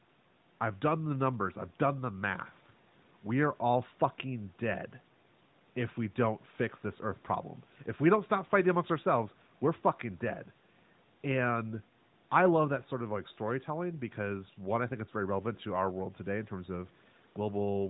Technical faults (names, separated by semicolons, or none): none